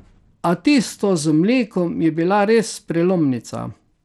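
Speech runs throughout with gritty, flickering treble and nothing above 16.9 kHz, which points to SBC starving its top sub-bands at around 96 kbps, likely Bluetooth SBC compression. A spectrogram shows a flat ceiling with patchy upper bands beneath it.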